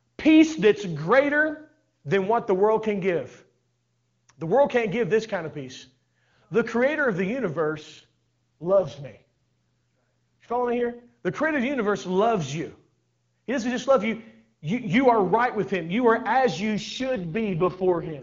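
At 7.75 to 11.06 s, after "creator of the", and 16.75 to 18.22 s, after "as you", an AMR rate drop roughens the speech into a raspy, synthetic sound, pointing to a fall from 23.85 to 6.6 kbit/s. The spectrogram keeps its full band with no gaps, but harmonics blur into noise.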